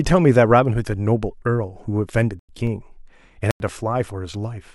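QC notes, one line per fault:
0.51 s, corrupt FLAC frame: a brief error peaking at about −24 dBFS, as flipped bits sent the decoder's prediction off course from the damaged bits on. The waveform shows a spike, the spectrogram a thin full-band vertical stripe.
2.39–2.67 s and 3.51–3.69 s, corrupt frame muted: the sound drops out abruptly for 0.28 s and 0.18 s because the decoder refused damaged frames and silence replaced them. The waveform goes flat, the spectrogram shows blank vertical gaps, and timing stays intact.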